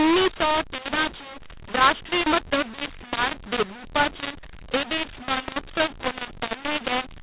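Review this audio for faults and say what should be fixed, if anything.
The speech carries a mu-law and A-law mix-up from start to finish: it was coded as A-law but decoded as mu-law, so sample levels get scrambled, pauses fill with hiss, and the sound turns harsh over the otherwise normal 4 kHz telephone band. Fix it by matching the decoder's law to the encoder's.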